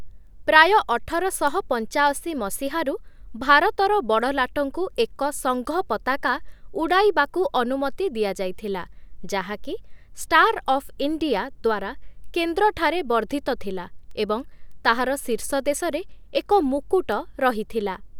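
From 0.27 s to 17.72 s the speech carries word clock ticks: sharp clicks of uneven strength recurring roughly every 0.7 s, about thirty in all. The receiving device runs on its own clock, a few tens of parts per million away from the sender's, so each time the two drift a sample apart, one sample is dropped or repeated. On a spectrogram each tick is a thin full-height vertical line. In the waveform it shows as a single-sample step or spike.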